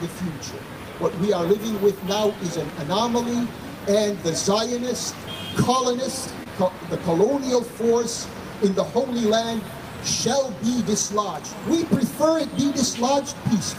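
At 6.43 to 6.48 s there is a short stall from a late packet. A packet did not arrive on time, so the jitter buffer ran dry. The receiver filled the gap by stretching the last sound for about 25 ms. When the packet came in, playback resumed from the same point. Nothing is lost. The sound simply hangs slightly too long, with a faint buzz or dip, and everything after it runs 25 ms later.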